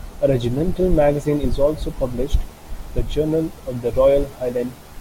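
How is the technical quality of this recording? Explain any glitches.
The recording is marred by one fault present throughout. Video or display buzz: a screen's video signal couples into the audio path, laying a 75 Hz buzz with hash above it roughly 25 dB under the speech.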